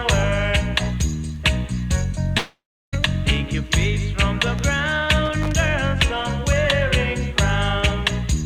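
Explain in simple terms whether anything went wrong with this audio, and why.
At 2.37 seconds the sound suddenly stops being itself. The last bit carries on as a fading buzz, then about a third of a second of near silence follows, and at 2.95 seconds the audio resumes with roughly half a second simply gone. This is likely a long network dropout: the data stopped arriving, and the player stretched what it had before giving up. Unlike a brief glitch, the gap is long and the missing part never returns.

From 5.25 to 5.52 seconds there is a short, irregular burst of crackling and scratching. That is loose connector crackle: a worn or dirty contact in a cable or socket kept connecting and disconnecting, chopping the signal into rough bits. It differs from the dropout because nothing is skipped or faded out. The sound keeps going but comes through broken up and noisy for about a quarter of a second.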